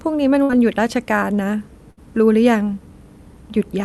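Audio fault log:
0.43–0.51 s and 1.91–1.99 s, burst of packet loss: In each spot, a short run of audio packets never arrived in time. The receiver covered roughly 58 ms by extending the last sound and letting it fade, then resumed with about 60 ms of speech skipped. On a spectrogram this shows as frozen horizontal bands that dim toward the end, then an abrupt change. On the waveform it shows as a repeating, decaying pattern followed by a jump.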